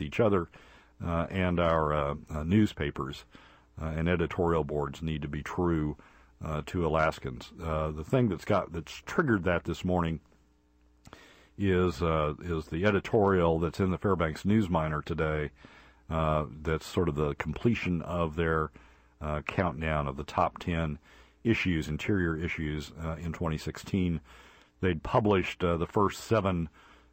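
Right near the start, at about 0.56 s, there's a tiny hiccup from lost LE Audio frames. The gap is around 10 ms, which fits a single dropped LC3 frame. The decoder papers over it by replaying the previous frame's spectrum with scrambled signs, so instead of a clean dropout you get a brief hissy smear. It's too short for any fade-out, so it's just a quick grainy blip.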